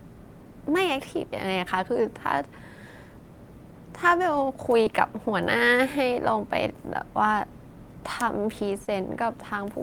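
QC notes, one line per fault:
4.83–4.87 s and 8.85–8.89 s, short concealed packet loss: about 20 ms of audio arrived too late each time, and the receiver synthesised a fill of 14 ms and then 22 ms from the preceding sound, causing a brief smear or wobble. A spectrogram shows smoothed, repeated harmonics or shaped noise; the waveform shows a stretch of copied cycles before the blend back.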